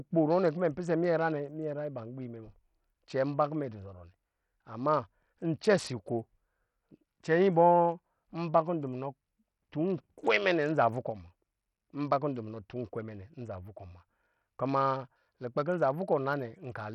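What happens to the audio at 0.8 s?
At 0.8 s the speech carries heavy damage present throughout, most likely from Bluetooth SBC compression. Starved of bits, the upper sub-bands flicker while gritty quantisation noise rides along, which fits a stream near 64 kbps. A plain low-pass would remove treble cleanly rather than making it unstable.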